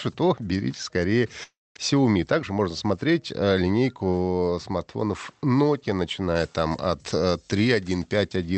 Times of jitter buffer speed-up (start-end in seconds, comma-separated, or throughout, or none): 1.93-2.99